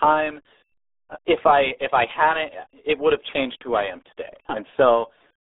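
The speech runs through the RealAudio 14.4 codec for its whole length. Its heavy coding damage fits an 8 kbit/s dial-up codec, leaving a band of roughly 300 Hz to 3.6 kHz with nothing above 3.8 kHz, so the speech sounds muffled and gargly throughout.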